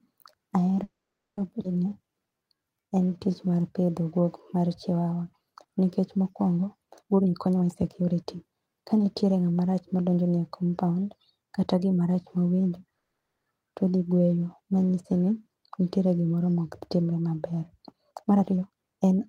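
Right at the start, from 0.83 to 1.39 s, there's a call audio freeze: the sound stops for about 0.54 s and sits in silence for most of that. The likely cause is packets held up in transit so the jitter buffer ran dry. The audio then resumes where it left off, so nothing is lost, just a gap inserted.

Straight after, at 1.63 to 1.66 s, comes a skip ahead. Roughly 0.3 s of speech is simply gone, and the two sides are butted together with almost no gap, so playback lurches forward.

Then from 1.89 to 3.92 s a jitter buffer slow-down kicks in, running at about 86% speed and adding 291 ms. The receiver is repeating pitch periods to rebuild its reserve, so the speech drags at unchanged pitch right up to "guok mar chiwawa nikech".

A jitter buffer speed-up follows from 7.03 to 9.60 s, between "mar chiwawa nikech mokuongo" and "rach madonjoni e". Here the buffer had too much queued, so short slices were trimmed out, roughly half a second in total. 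The speech runs at about 121% speed, sounding rushed but at the same pitch.

A second call audio freeze hits from 12.99 to 13.48 s, after "kata gimarach mawendo". That's about 0.47 s of silence before the speech picks up again with "todhi gweyo manyiesini nitie", again with nothing missing.

Finally, from 18.11 to 19.26 s, there's another jitter buffer speed-up, this time more aggressive at about 133% speed. Around 0.4 s gets cut out, so the last stretch sounds noticeably hurried.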